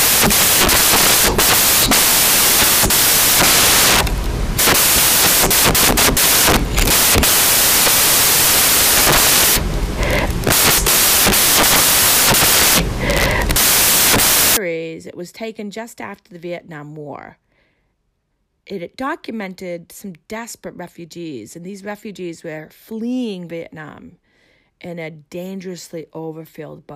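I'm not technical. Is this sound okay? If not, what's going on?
No. From the start until about 14.57 seconds, the speech is buried under a loud hiss like harsh static. This is samples built from the wrong bytes: each tiny slice of digital sound is stored as several bytes, and the player put them together in the wrong order or out of step, so the small, rapidly changing detail came out as loud noise instead of speech.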